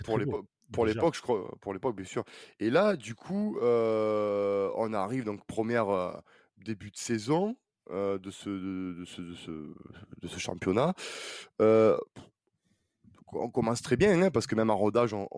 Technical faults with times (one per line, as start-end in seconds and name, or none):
none